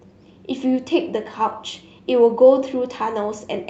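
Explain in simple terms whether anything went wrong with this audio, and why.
No, nothing went wrong here.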